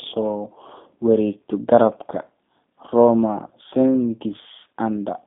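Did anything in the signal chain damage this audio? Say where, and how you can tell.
Yes, at the codec: G.729 coding throughout, with nothing above 3.7 kHz and a rough, synthetic texture from pulse excitation that plain band-limiting wouldn't add.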